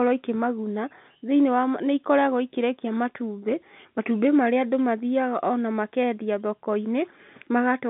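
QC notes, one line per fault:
No faults heard in this speech clip.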